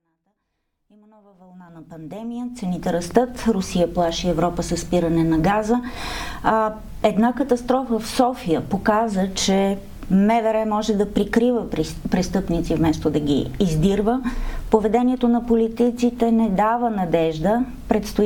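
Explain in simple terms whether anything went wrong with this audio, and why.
Nothing went wrong here; the sound just eases in gently from silence over the first 3 seconds or so, the way an editor would fade it up, and there's nothing wrong to point to.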